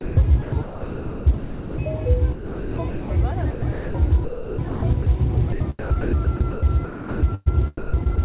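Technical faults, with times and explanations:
0.01–1.78 s, 2.32–3.10 s, 3.50–3.94 s, 4.24–5.06 s, 5.52–7.48 s and 7.77–8.18 s: sound chopped by the voice detector, likely the sender's gating, which switched transmission on and off repeatedly. Quieter parts were swapped for synthetic comfort noise, from 1.3 s in the first stretch down to 0.2 s in the last. The gaps are filled with comfort noise, which distinguishes this from packet loss with its clicks or smeared repeats. The narrowband band limit at 4 kHz stays constant.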